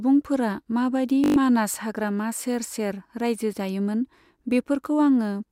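From 1.24 to 1.36 s, a system hang loop repeats one 20 ms buffer six times, giving a 50 Hz buzz and losing about a tenth of a second before "मानास हाग्रामा सेर सेर".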